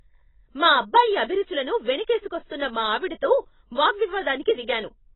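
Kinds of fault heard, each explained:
AAC compression: The whole clip sounds heavily squashed, with nothing above 8.7 kHz, so the speech comes across dull and smeared, and sibilants pick up that warbly, fizzy texture. It's likely AAC-LC at a low rate, something that fits roughly 16 kbps. At that budget the encoder quantises its frequency lines hard against a hearing model and drops the top band altogether to save bits.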